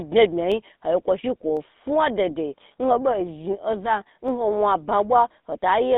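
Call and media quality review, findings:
Buzzy, gravelly roughness across the whole speech clip, codec damage plainly audible; band limited to roughly 200 Hz–3.6 kHz, nothing above 4 kHz. Probable component: GSM full-rate codec, consistent with a 13 kbps GSM full rate path. Mechanism: vocal-tract model driven by regular pulse excitation keeping only a subsampled excitation, so fine voice texture is replaced by pulse-train buzz and high frequencies are discarded.

Single sharp clicks at 0.52 s, 1.57 s (just before "fa dei dei") and 4.28 s (just before "nwo wan ba"); each a thin vertical line in the spectrum, no audible gap. Likely cause: dropped samples in the stream, a tiny fraction of a millisecond lost each time, so the waveform jumps abruptly to a later value and produces a discontinuity click.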